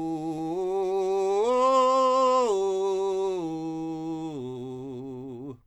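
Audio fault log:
Nothing stood out on listening to this music.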